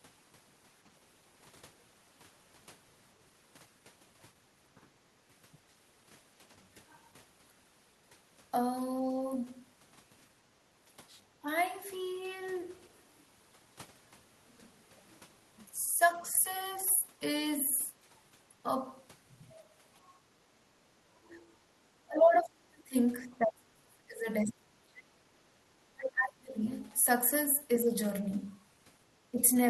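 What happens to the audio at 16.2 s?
At 16.22 s the speech briefly dips by around 10 dB until 16.33 s, a short gap of roughly a tenth of a second. This is speech suppressed in double talk, likely an echo canceller attenuating the near-end talker because it could not distinguish that speech from loudspeaker echo while both sides spoke.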